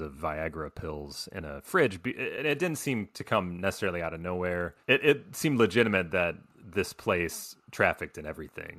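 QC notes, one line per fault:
2.37 s, AAC frame loss with muting: a single frame of about 10 ms drops out. The decoder zeroes that frame's spectrum, so the overlapping windows fade the speech out and back in instead of cutting it. The result is a brief dip. A raw sample dropout snaps off hard, and concealment by repetition fills the gap with smeared sound. The short frame matches the light coding around it, likely low-delay AAC.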